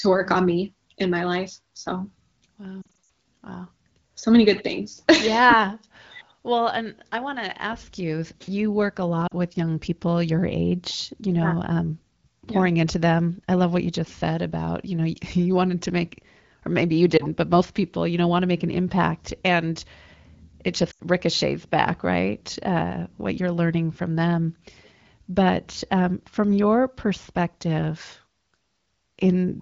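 Lost AMR speech frames disrupt this speech clip at 2.82, 9.27, 17.17 and 20.91 s. Checksum failures from radio errors forced the AMR decoder to repeat its last good pitch and vocal tract settings at falling gain, producing dips, warbles and brief drops to near silence. Near 2.8 s about 160 ms of audio goes missing across a 280 ms stretch, with gaps up to 60 ms. Later gaps fall between "you you work a" and "with young people your" (40 ms), between "make or maybe you" and "but most people you" (20 ms), and just before "ricochets back right" (80 ms). All of this is carried through the AMR wideband (HD Voice) codec, whose light coding damage fits a rate around 16 kbit/s.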